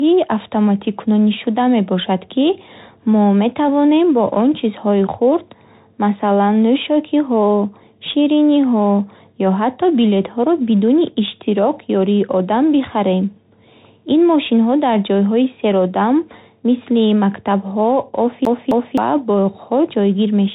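It's a speech recording that has come through a Bluetooth CVSD headset codec, and the damage is plainly audible all the way through. Nothing gets past about 3.8 kHz, so the whole thing sounds narrowband and boxed-in, and the coding roughness that fits a 64 kbps CVSD link sits on top. CVSD sends just one bit per sample, up or down, with a step size that keeps adapting, so it can't keep up with fast, bright changes and smears them. Then from 18.45 to 18.98 s there's a CD stuck on one turn. A roughly 261 ms slice of audio plays again twice, with a brief dropout at each jump back. That's a quick, even stutter, the kind you get when a scratch keeps kicking the laser back to the same spot on the disc.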